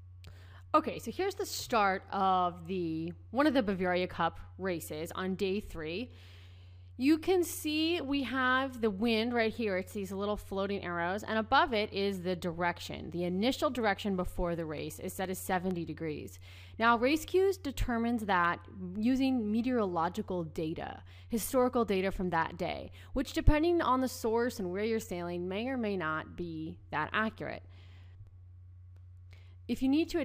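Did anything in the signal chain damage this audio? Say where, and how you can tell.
Yes. Two bursts of evenly spaced clicks, six apiece, come at 14.78–15.94 s and 28.04–29.20 s, roughly five a second and each only a few milliseconds long. These are CD scratch ticks from disc playback: a blemish overwhelms error correction once per revolution, forcing brief interpolation or muting.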